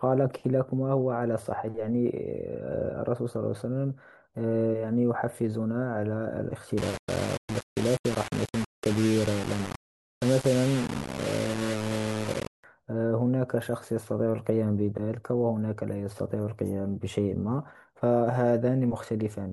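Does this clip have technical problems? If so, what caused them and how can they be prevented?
Yes. From 6.78 to 12.64 s the speech turns harsh and grainy, with the grit rising and falling along with the sound, and the quietest stretches drop out or sputter. This is low bit depth without dither, likely from rounding to about 4 bits, which puts an error roughly 10 dB below the signal that tracks it. On a waveform the section looks stair-stepped; a spectrogram shows broadband hash that appears only where sound is present. To prevent it, keep at least 16 bits and add dither whenever reducing bit depth.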